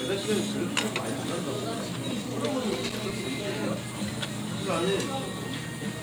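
A worn or dirty contact in the signal path made and broke connection rapidly from 2.71 to 3.12 s, producing loose connector crackle: the sound is chopped into an irregular burst of scratchy crackle lasting about 0.4 s.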